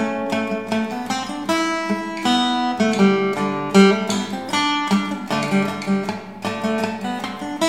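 No technical faults are audible.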